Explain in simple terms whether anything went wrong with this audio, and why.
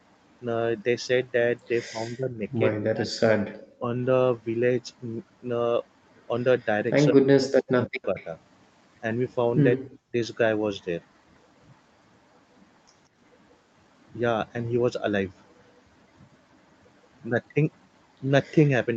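Two problems can be heard. The first is speech suppressed in double talk. Around 1.9 to 3.15 s, 3.79 to 3.86 s, 7.12 to 8.19 s and 9.77 to 10.14 s the voice sinks sharply or drops out in pieces. This is likely because the echo canceller mistook overlapping talk for echo.

The second is echo leak, heard at 3.58 to 3.72 s, 6.6 s, 7.86 to 8.25 s and 18.65 to 18.69 s. A faint copy of the voice returns 177 ms late. Unlike suppression, which removes sound, this adds a quiet repeat, likely from a loudspeaker's echo getting past cancellation.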